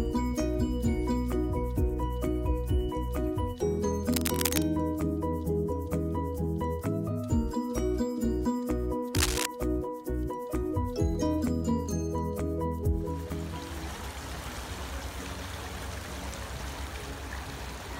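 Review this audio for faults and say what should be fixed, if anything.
Brief scratchy, rustling bursts at 4.12–4.75 s and 9.15–9.46 s, the second about as loud as the sound itself: cable scratch noise, likely a worn connector or cable being moved. Replace or secure the cable and reseat the connectors.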